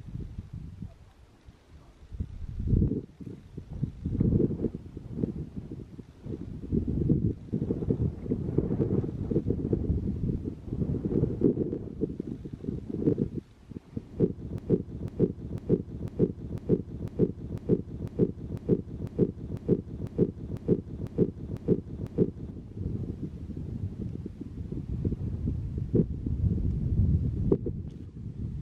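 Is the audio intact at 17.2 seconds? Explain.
No. At 17.2 seconds the audio sits inside a broken-record loop running from 14.58 to 22.51 s. A 0.5 s fragment repeats exactly, back to back, 16 times. The likely cause is a stalled player or stream resending its last buffer, so the original audio there is lost.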